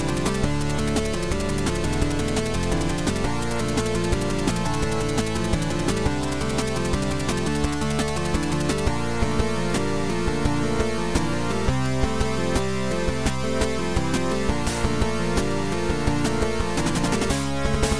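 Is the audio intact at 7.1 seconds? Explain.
Yes, at 7.1 seconds the audio is intact, with no audible dropout, glitch or distortion at that moment.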